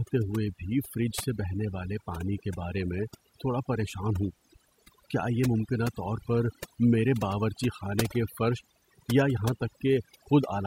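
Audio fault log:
Throughout, overdone noise removal: the spaces between phrases drop to an unnatural near-silence dotted with twinkling specks, and the speech itself has its quieter detail hollowed away. A noise reduction process was pushed too hard. Any frequency band sitting close to its noise estimate was pulled far down or switched off entirely, so the softer components of the speech were discarded along with the background noise.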